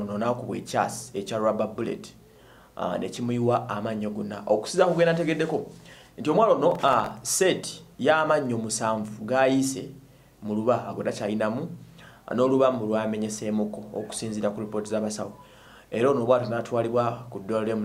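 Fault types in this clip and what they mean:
Processor overload crackle: the processor fell behind and missed the deadlines for a run of very short audio buffers, roughly a millisecond and a half each. About twenty such misses cluster between 6.72 and 7.19 s. Each missed buffer drops out as a brief gap of silence with abrupt edges, and these rapid hard cuts merge into a gritty crackling tear over the sound, which clears once the load eases after 7.19 s.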